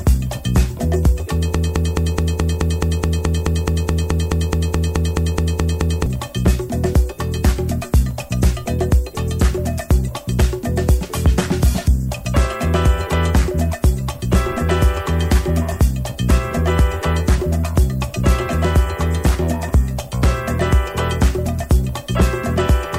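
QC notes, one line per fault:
throughout: low bit depth with noise shaping. Nine bits; rounding error is pushed upward as a steady thin hiss climbing toward the top, about 30 dB below the signal.
1.55–6.06 s: broken-record loop. A 213 ms fragment repeats 21 times, replacing the intended audio; likely a stalled stream resending its last fragment.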